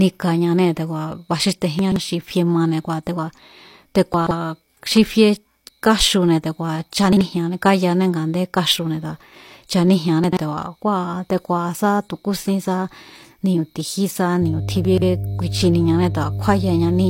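Chunks out of order jumble the speech at 1.79 s (just before "xi fie"), 4.14, 7.13, 10.24 and 14.85 s. Blocks of about 43 ms play one to three places late, and the spectrogram shows abrupt vertical seams at each join. From 14.42 s, after "ni̱u̱ ti̱jí sá", to the end, mains hum adds a 50 Hz drone only a little below the speech: a steady low horizontal line on the spectrogram.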